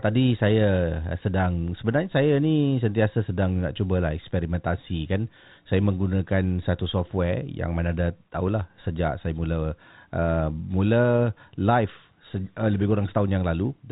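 No technical faults can be heard in the speech, which comes through the G.711 telephone coding path as expected, with nothing above 3.8 kHz and the faint level-following quantisation noise typical of that 8-bit logarithmic format.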